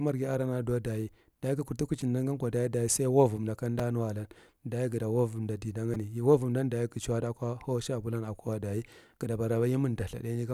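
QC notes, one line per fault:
2.01 s, 3.79 s, 5.94 s, repeated buffer: brief clicks or buzzy ticks, just before "gan ko daye sai" and just after "ko daye sai louvomda". Each time a 5 ms chunk replays (twice, once, then three times) with hard joins, when fresh audio came late.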